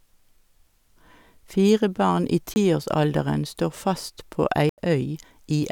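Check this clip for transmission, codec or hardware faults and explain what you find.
Two dropouts to blocks of digital silence. At 2.54 to 2.56 s the speech cuts out for about 21 ms, and at 4.69 to 4.78 s for about 85 ms. The output buffer likely wasn't filled in time, so zeros went out instead, which fits 1024- and 4096-sample blocks. Each cuts out and back with no fade. The first is a very brief gap, the second a short hole.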